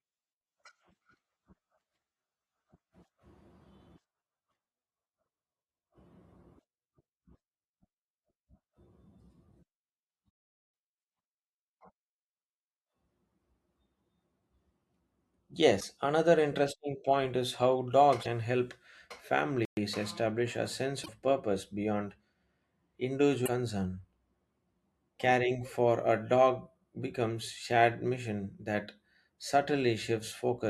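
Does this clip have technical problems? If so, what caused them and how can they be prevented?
Yes. The speech has damaged data in a compressed stream at 15.77–15.84 s, at 18.20–18.27 s just after "interesting point is how", at 21.02–21.09 s between "establish a sense" and "purpose beyond", and at 23.42–23.48 s. Each event lasts roughly 60 to 70 ms and sounds like a short chirp or blip breaking into the speech. Corrupted bytes in the encoded stream caused the decoder to misread or reject the affected frames and lose sync until it locked onto the next valid frame header. Carrying the audio in a container with per-frame checksums over a reliable transport, with error concealment in the decoder, prevents this.

A playback stall occurs at 19.65–19.77 s, where the sound cuts to silence for 120 ms in mid-flow and then resumes with "establish a sense". The output went quiet while the player had nothing to render, likely because its buffer ran dry or its audio thread was blocked, and it continued once data was available again. 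Keeping a larger playback buffer and running audio on a high-priority thread that never waits on disk or network I/O prevents this.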